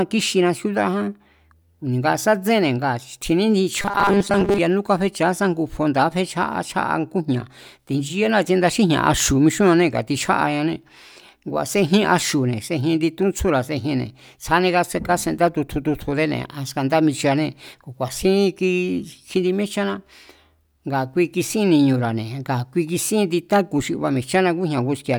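From 3.8 to 4.6 s the speech takes on robotic sound from repeated short buffers. The voice collapses into a rigid, metallic buzz pitched at 200 Hz. It still tracks the rough shape of the words. The likely cause is audio arriving too seldom, so a fragment of about 5 ms is replayed to fill the gaps. Over most of this stretch, the real audio is skipped.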